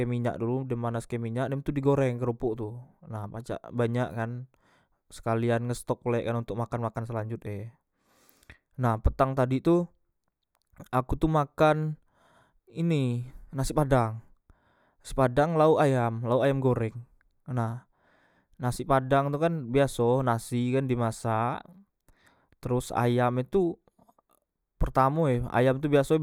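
No technical faults can be heard anywhere in this recording.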